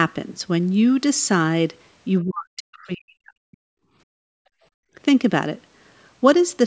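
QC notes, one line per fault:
2.24 to 3.65 s, speech suppressed in double talk: the talker's level collapses over roughly one and a half seconds, at worst by around 40 dB, then recovers. This is likely an echo canceller that heard far-end audio over the talker, could not tell the two apart, and attenuated everything. Unlike gating of the background, the loss falls on the speech itself.
3.93 to 4.95 s, background gated by the echo canceller: the room tone drops away by about 36 dB for about a second, then returns. The canceller clamped the microphone hard while the loudspeaker was playing and released afterwards. It differs from double-talk suppression because only the ambient bed vanishes. The 8 kHz ceiling of the call path applies in both spans.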